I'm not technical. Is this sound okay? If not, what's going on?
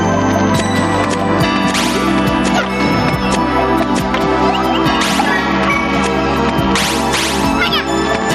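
No. Gain pumping runs from start to finish. The level keeps getting pulled down whenever something loud happens and then rising back again, a noticeable rise and fall that sounds like breathing. The likely cause is the input level being set much too high, so an automatic limiter has to clamp down hard on every loud moment and then let go again. That constant squeezing also flattens the difference between loud and soft.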